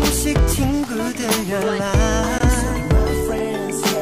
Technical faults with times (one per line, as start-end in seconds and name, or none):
0.38 gap between stream segments
2.38 gap between stream segments